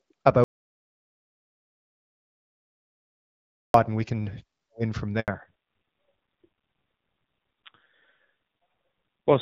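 Audio dropout to silence from 0.44 to 3.74 s: the speech cuts off mid-flow and about 3.3 s of silence follows, with no room tone, before it resumes on "and we can win". The input was likely lost while the recorder kept writing silence, so that stretch of speech is gone.

Handover gap from 5.20 to 5.28 s, right after "we can win from": the call was switched between networks and no speech frames arrived for 80 ms. The voice fades out within a few tens of milliseconds and stays silent until the new link begins carrying audio.

Fallback to narrowband from 5.28 s to the end: up to this point the HD Voice wideband codec gives clear speech with only light coding damage. After the switch, everything above 4 kHz disappears and the voice turns duller and rougher. This points to a low-rate narrowband codec replacing the wideband one.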